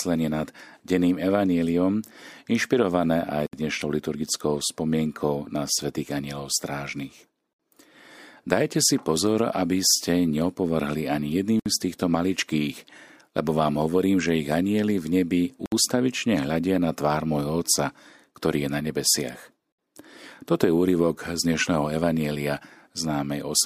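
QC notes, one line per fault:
3.47, 7.53, 11.60, 15.66 and 19.72 s: gap at a join of encoded pieces. Silences of 64 to 67 ms cut the speech every 4.0 s, including between "ste neopovrhli ani jedným" and "z týchto maličkých lebo". Each is left by encoder start delay and last-frame padding at an untrimmed join.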